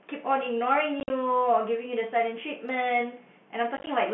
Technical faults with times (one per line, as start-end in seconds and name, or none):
1.00-1.10 packet loss filled with silence
3.77-3.87 packet loss filled with silence